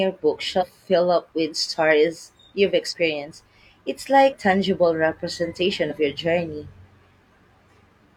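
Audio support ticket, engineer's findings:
Speech jumps forward. Compressed frames skipped, consistent with frames of about 43 ms. 0.58 s, just before "fill up with stories": about two frames, roughly 100 ms gone. 2.88 s, after "up with stories you've": one frame, about 40 ms. 4.29 s: about four frames, roughly 150 ms. 5.87 s, before "your journey": one frame, about 40 ms.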